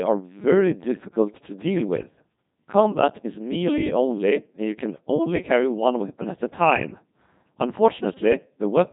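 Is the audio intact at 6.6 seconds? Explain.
No, at 6.6 seconds the speech is still running through the Codec 2 vocoder that colours the entire clip. Only pitch, voicing, energy and a rough spectral envelope make it through, and the decoder rebuilds the voice from sine waves, so the original waveform is gone. The damage is heavy: the voice comes out robotic and buzzy, with nothing above 3.8 kHz, which fits a low-rate mode around 2.4 kbit/s.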